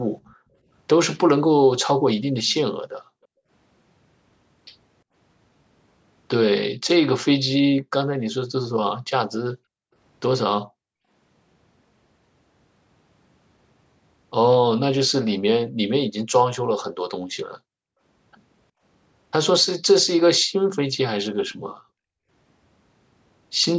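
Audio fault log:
0.24–2.54 s and 21.49–21.75 s, echo leak: a faint copy of the speech trails by about 0.35 s (354 ms, then 375 ms) at about 30 dB down, likely a far-end loudspeaker echo the canceller missed.
0.34–3.5 s, 6.74–11.09 s and 17.2–22.3 s, background gated by the echo canceller: the room tone ducks by up to about 40 dB, for roughly 0.7 s, 1 s and 1.5 s in total in the three stretches, while the canceller clamps the mic.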